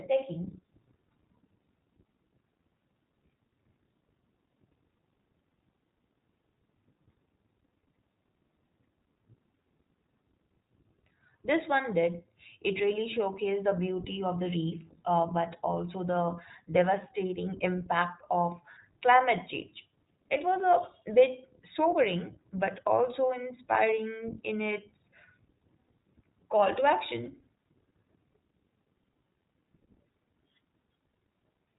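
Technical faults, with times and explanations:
Throughout, iLBC codec: the speech is band-limited, with nothing above about 3.8 kHz, so sibilants and breathy consonants lose their edge. The codec damage is plainly audible as a rough, slightly synthetic texture. Each short frame's excitation is coded on its own, without drawing on the previous frame, and the character of the artefacts fits 20 ms frames. The roughness suggests the 15.2 kbps mode.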